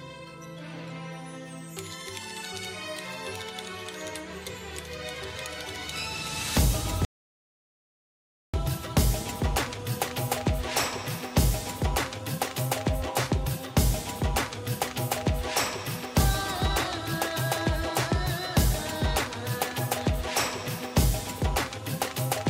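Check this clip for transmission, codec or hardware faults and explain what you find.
One fault, an audio dropout to silence, from 7.05 to 8.54 s. The input signal was likely lost somewhere upstream while the recorder kept writing silence for 1.49 s. The sound cuts off abruptly into dead silence with no room tone, then resumes mid-flow.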